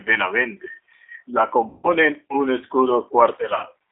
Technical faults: G.729 codec; VoIP packet loss concealed by the speech codec

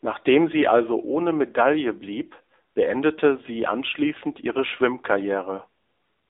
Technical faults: AMR narrowband mobile codec

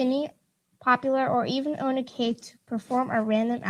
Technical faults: lost packet rebuilt from error correction

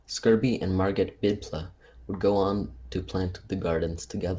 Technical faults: none

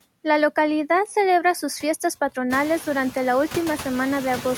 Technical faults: noise suppressor artifacts

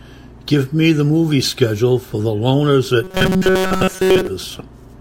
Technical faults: robotic sound from repeated short buffers

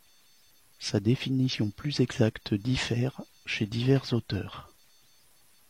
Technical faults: low bit depth without dither; damaged data in a compressed stream

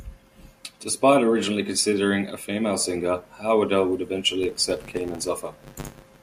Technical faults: filter restarted on every block

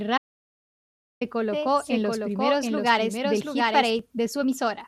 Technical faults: audio dropout to silence; doubled audio track

